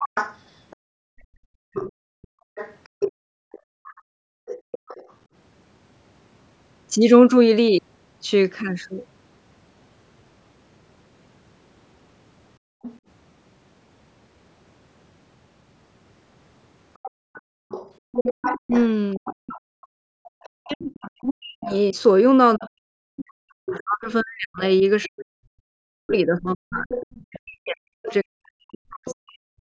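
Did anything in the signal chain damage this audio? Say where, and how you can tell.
Yes. The damage happens at the call-processing stage, in the echo canceller.

The other side's voice leaks through in three stretches: 0.0 to 5.13 s, 12.82 to 12.99 s, and 17.03 to 29.15 s. In the first and last stretches it sits roughly 10 dB below the talker, and in the short middle one it is fainter, around 20 dB down. A second voice running under the main one is the giveaway. The likely cause is loudspeaker playback reaching the microphone and the canceller not subtracting all of it.

The background is gated by the echo canceller at 0.76 to 4.81 s, 12.58 to 12.82 s, and 17.11 to 18.12 s, with drops of about 40 dB. The room tone falls to near silence for roughly three seconds, a fifth of a second, and under a second respectively, then snaps back. The canceller is clamping the microphone while it judges the loudspeaker active and releasing when it lets go.

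Speech is suppressed in double talk from 18.56 to 29.51 s. The talker's level dips by up to about 40 dB, in pieces totalling around ten seconds, largely while the leaked far-end voice is also present. This is likely the canceller failing to separate near-end speech from the echo when both sides talk at once, so it attenuates both.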